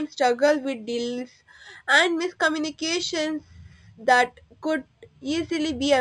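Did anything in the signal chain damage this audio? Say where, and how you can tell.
Yes: imaging from linear upsampling throughout, at rate conversion. Metallic shimmer mirrors the band at 5.5–11 kHz, about 20 dB down, fitting 11 kHz raised to 44.1 kHz; aliasing would fold downward instead.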